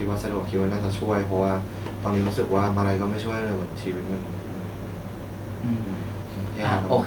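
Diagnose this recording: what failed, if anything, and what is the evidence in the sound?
A network or jitter-buffer fault: a block of queued audio was dropped, on the way or by the receiving buffer to catch up, a skip ahead, with later speech already waiting behind it. Around 2.67 to 2.78 s the speech jumps forward with no silent gap, and roughly 0.7 s of material is simply gone. The two sides are butted almost directly together, so the speech lurches abruptly, and the playback delay drops by about the same amount.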